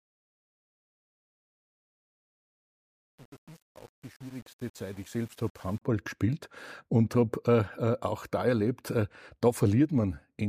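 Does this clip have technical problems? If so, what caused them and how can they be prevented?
Yes. From 0.0 to 5.81 s, just before "gespielt und", the speech fades in with truncation distortion on the fade. The gain stage rounds each sample to very few levels without dither, and the coarseness fits roughly 7-bit resolution. The quiet start sounds gritty. On a waveform the low part of the fade shows square staircase steps. A spectrogram shows broadband grainy streaks rather than clean harmonics. To prevent it, apply fades at high internal precision and dither before reducing word length.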